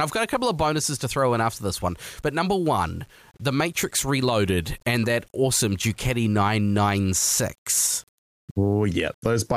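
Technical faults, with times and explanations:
Throughout, low bit depth without dither: there's a grainy, fizzy distortion riding on the speech that shifts with it, roughest on quiet syllables and decaying word endings, where the sound turns gritty or sputters toward silence. The error sits only about 40 dB below the signal, which fits an 8-bit signal. The likely cause is plain rounding to those few levels with no dither, so the error tracks the waveform instead of spreading into a steady hiss.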